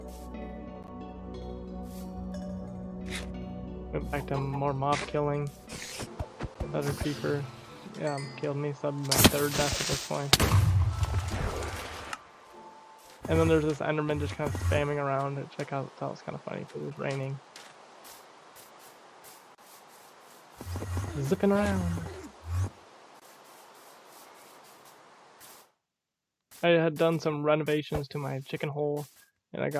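No technical faults are audible.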